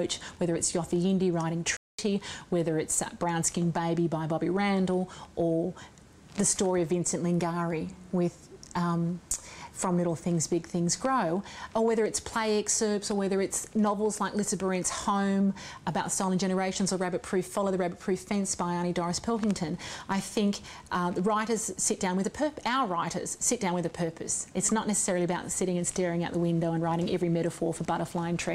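At 1.77 s there is a playback stall, likely from the player running short of data or its output thread being held up. The sound cuts to silence for about 0.22 s, until 1.99 s, then picks up again.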